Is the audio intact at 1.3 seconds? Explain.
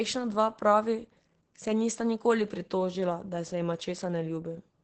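No, Opus voice compression runs throughout, including 1.3 s: SILK's coarse low-bitrate coding sounds muffled and hoarse, and a spectrogram shows nothing above about 8.7 kHz.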